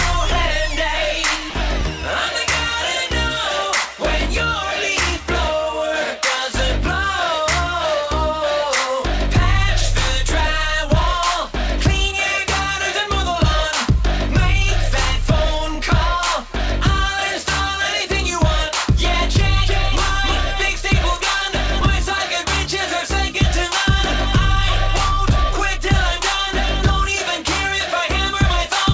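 At about 1.50 to 1.54 s the sound cuts out for roughly 40 ms and a short patch of steady noise sits in its place before the audio picks up again. That's most likely sound dropped by the voice detector: the sender judged that moment to be background, stopped transmitting, and the receiver filled the gap with comfort noise. The whole clip is band-limited with nothing above 8 kHz, which fits a G.722 call path.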